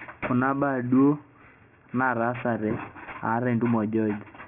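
Aliasing runs through the whole clip. The speech was brought down to a lower sample rate without a proper filter first. Everything above the fold point near 3 kHz has been mirrored back below it, which fits a rate of 6 kHz. The folded energy sits roughly 20 dB under the speech. Sibilants turn gritty and metallic, with false tones that don't follow the voice. The spectrum stays dense right up to 3 kHz, then stops.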